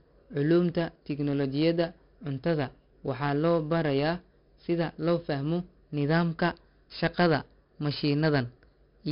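From start to finish the speech carries the grit of heavy 4-bit ADPCM compression. Each sample is coded as a small step from a predicted value, so the error rides on the signal: a rough hiss that swells on loud syllables and sharp onsets, where the step size lags. Nothing passes above about 5.3 kHz, which points to roughly 44 kbps at a low sample rate. Unlike steady background noise, it falls away in pauses, and it lacks the swirly warble of perceptual codecs.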